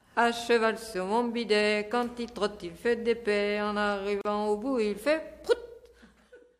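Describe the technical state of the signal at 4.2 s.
At 4.21 s there's a gap at a join of encoded pieces: about 38 ms of silence, running to 4.25 s, where two separately encoded chunks were butted together untrimmed. Encoder start delay and last-frame padding leave a hole with smeared edges, then the sound picks up where it stopped.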